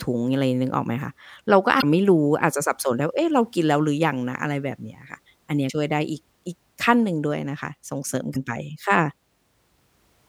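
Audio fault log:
1.79–1.84 s, 5.66–5.70 s, 8.32–8.36 s: damaged data in a compressed stream. Corrupted bytes make the decoder misread frames and lose sync while it hunts for the next valid frame header, producing three brief chirps, squawks, clicks or short holes in the speech, each about 40 ms long.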